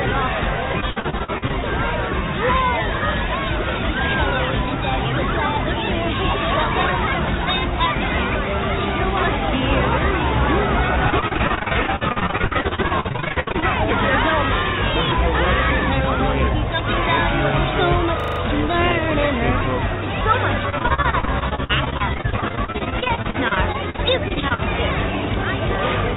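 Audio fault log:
0.72–1.52 s, 11.10–13.64 s and 20.70–24.60 s: repeated packet loss (robotic sound). Gaps of up to about 66 ms arrive in quick succession. Each is filled by stretching the preceding sound. Between a quarter and two fifths of each stretch is patched, so it turns choppy.
18.2–18.4 s: system hang loop. A 40 ms slice repeats exactly five times. The playback buffer kept cycling while the system stalled. At a 25 Hz repeat rate this comes across as a brief, rapid stutter rather than a buzz.
Throughout: the call path runs through a narrowband telephone codec, which fits G.711 A-law at 64 kbps. Nothing is heard above 4 kHz, so the audio has a muffled, phone-line quality.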